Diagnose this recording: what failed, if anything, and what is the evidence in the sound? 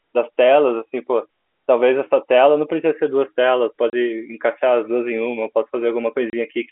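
The network stage failed: packet loss filled with silence. The speech drops out twice, at 3.9 s and 6.3 s. Each hole lasts 30 ms, which fits one lost packet. The holes have hard edges. The receiver played silence instead of concealing the gap.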